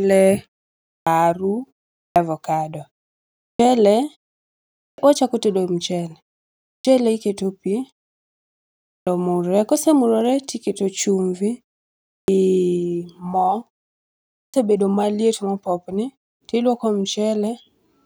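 The output device sleeps through each pause and takes between about 170 and 200 ms to wake, causing a clipped start after a pause at 0.89, 1.99, 3.41, 4.81, 6.68, 8.88, 12.1 and 14.34 s. Speech then bursts in abruptly without its opening sounds, as before "omurre kosemurore to iketo".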